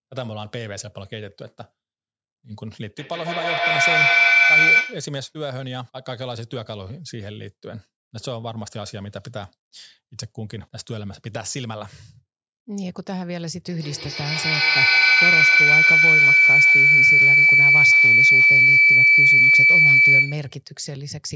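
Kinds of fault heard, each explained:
Feedback howl: A microphone-to-loudspeaker loop between two devices in the same room gains level on each pass, so the sound grows and narrows to a tone near 2 kHz, with repeats roughly every 150 ms. It runs from 2.98 to 5.2 s and again from 13.69 to 20.62 s, reaching about 15 dB above the speech. Ordinary echo fades with each repeat and keeps the original sound's character. Here the repeats build instead and collapse into a single sustained pitch.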